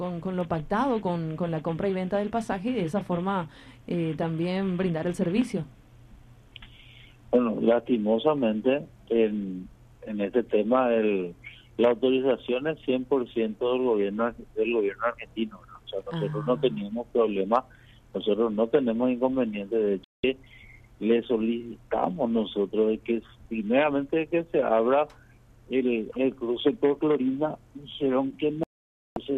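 At 20.04 s the audio cuts out for about 0.2 s, and again at 28.63 s for about 0.53 s: digital broadcast dropouts, where the receiver muted on lost or corrupted frames. Each gap shows as a flat waveform and a blank spectrogram column across all frequencies.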